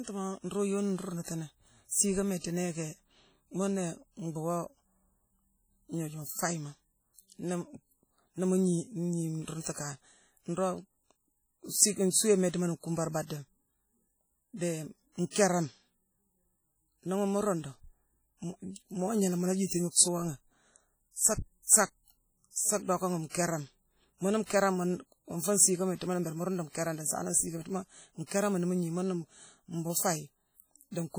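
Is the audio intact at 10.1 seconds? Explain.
No. At 10.1 s, as throughout this speech, likely WMA compression at a low bitrate (the damage fits about 32 kbps) zeroes weak spectral detail and smears quantisation noise, leaving heavy ringing, washiness and hiss that breathes with the speech.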